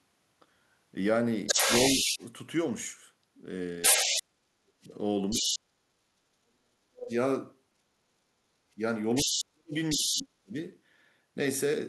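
From 1.46 to 2.26 s a second voice, about as loud as the talker, comes through alongside them. This is the other side's voice leaking through, likely because far-end audio from a loudspeaker reached the microphone and was not fully cancelled. In the same window, from 1.52 to 2.2 s, the talker's own voice sinks by around 10 dB. That is speech suppressed in double talk, likely the echo canceller turning everything down when both sides spoke at once.

The pattern returns more strongly from 3.82 to 5.59 s, with the leaked voice sitting above the talker. The talker is pushed down much harder between 3.89 and 7.13 s, by roughly 40 dB, and is affected for about two seconds in total. A faint blip of the other side surfaces again at 7.1 s.

From 8.75 to 10.56 s the talker again dips deeply, by roughly 35 dB, for around a second in all. The other side's voice comes through at a similar level to the talker from 9.14 to 10.23 s.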